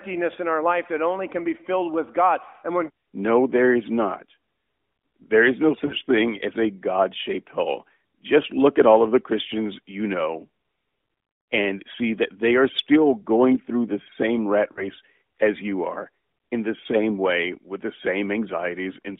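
A speech recording over a narrowband AMR mobile link shows lost AMR speech frames, where corrupted frames force the decoder to extrapolate, leaving brief fading warbles. They fall at 5.86 to 5.93 s, between "is no" and "thing as a", and at 14.72 to 14.85 s, between "through the same rat" and "as you are in". Each fits two lost 20 ms frames.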